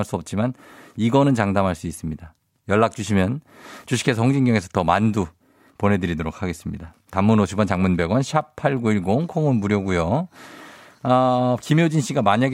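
No technical faults are audible.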